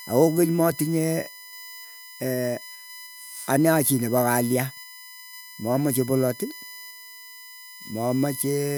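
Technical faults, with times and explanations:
Throughout, USB whine: a steady 1 kHz tone, strongest at its 2 kHz harmonic and roughly 20 dB below the speech, as current drawn in 1 ms bus frames leaks through power or ground; its fixed kilohertz pitch sets it apart from 50 or 60 Hz mains hum.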